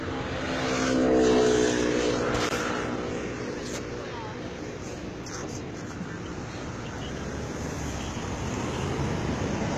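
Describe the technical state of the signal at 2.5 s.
At 2.5 s there is a block of digital silence from 2.49 to 2.51 s, a 20 ms stretch where the signal drops straight to silence, typically because the output buffer was not filled in time. The sound stops and resumes with no fade, and the whole event reads as a brief hole. Unlike a codec dropout or packet-loss concealment, nothing is smeared, repeated or faded. The gap is true, flat silence with hard edges.

Underneath, the treble carries HE-AAC compression damage that is plainly audible here as well. The highs sound gritty and metallic, because the upper band is synthesized from copied lower bands, with nothing present above 14.8 kHz. This points to a bitrate around 20 kbps, with spectral band replication as the likely cause. That separates it from a plain low-pass filter, and from MP3's swirling artefacts.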